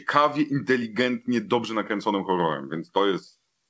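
Nothing stood out on listening to this speech, whose top end stops at about 8 kHz, as expected from a wideband call codec such as G.722.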